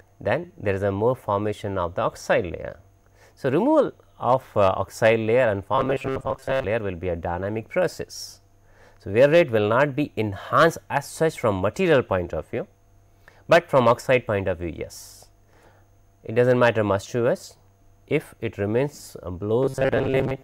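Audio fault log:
5.75–6.65 s and 19.63–20.44 s, robotic sound from repeated short buffers. In both stretches the sound turns into a rigid, metallic buzz at 133 Hz. Its rough contour is still audible underneath. The likely cause is new audio arriving too seldom, so a very short piece is replayed over and over. A 133 Hz buzz fits a loop of about 7.5 ms. Most of the real audio is skipped, replaced by these repeats. The second stretch lasts until the clip ends.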